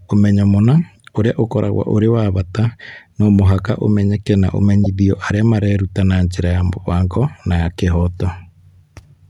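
A speech clip with one corrupt frame decoded, from 4.84 to 4.87 s. It falls between "no mũhaka ũmenyeke na" and "arĩa mareruta na njĩra". Damaged bits in a single compressed frame were decoded anyway. Misread values scattered energy wrongly, giving a brief, loud blip peaking near -5 dBFS.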